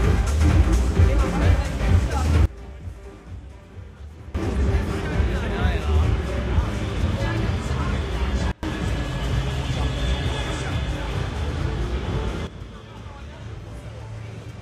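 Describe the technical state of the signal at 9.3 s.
At 9.3 s the signal is intact, with no audible fault at that moment.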